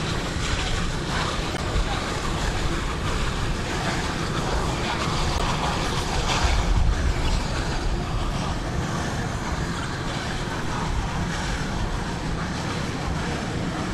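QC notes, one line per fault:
1.52–1.60 s, 5.36–5.42 s, 7.25–7.29 s, 9.76–9.84 s: corrupt frame decoded. Each is a brief chirp or noisy blip that cuts across the sound. Damaged bits in a compressed frame were decoded as if valid, so misread gains and codes put energy at the wrong frequencies for the length of the bad frames. Each burst spans roughly two to four frames, which explains its 40–84 ms length. The errors peak at about −20 to −10 dBFS, and the one at 5.36 s is loudest.
10.64 s: DC step. A single low thump is heard while the sound itself carries on unchanged. The waveform's zero line suddenly jumps to a new offset, and that abrupt shift registers as a click or thud. The offset does not hold. It drains away through a high-pass filter at about 2 Hz, so the baseline creeps back toward zero over the following fraction of a second with no further audible event.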